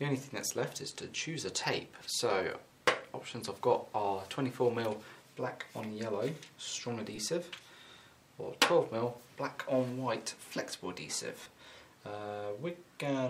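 Lost LE Audio frames at 0.49 s, 7.15 to 7.18 s and 11.43 to 11.46 s left the LC3 decoder to patch the gaps (about 7.5, 22.5 and 30 ms, fitting one, three and four frames) by replaying the last spectrum with random signs. Each gap is a brief noisy smear.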